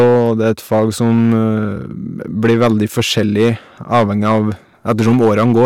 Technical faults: hard clipping

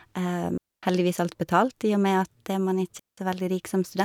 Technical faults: digital wireless dropout

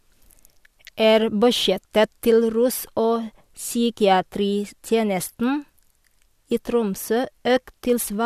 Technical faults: none

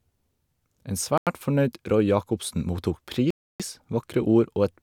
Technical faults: Bluetooth stall

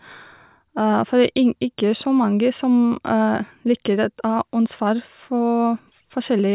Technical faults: none

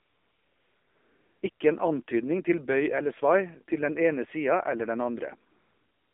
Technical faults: AMR narrowband mobile codec; AMR comfort noise

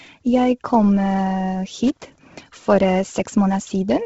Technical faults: Bluetooth LC3 compression; loose connector crackle

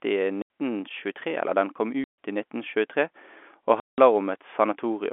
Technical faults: packet loss filled with silence

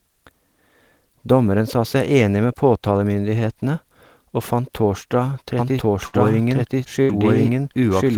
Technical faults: doubled audio track; burst of packet loss

